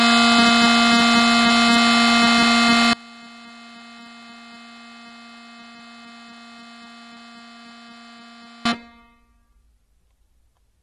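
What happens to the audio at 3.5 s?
The signal path likely lost the music at 2.93 s and did not recover it until 8.65 s, so 3.5 s falls inside a 5.7-second audio dropout to a faint residue. The path after the break stayed live, so instead of silence the gap holds only faint sound, about 25 dB below the music's normal level. The cut at 2.93 s and the return at 8.65 s are both abrupt, not a fade or a pause in the playing.

Throughout the clip, including this moment, the sound has also passed through AAC compression, likely AAC-LC at a low bitrate. The damage is plainly audible and fits a rate of around 39 kbps. To save bits, the encoder discarded everything above 16.5 kHz and quantised the remaining spectrum coarsely against a hearing model. The music comes out dull and smeared at the top, with a warbling, fizzy texture on sustained tones.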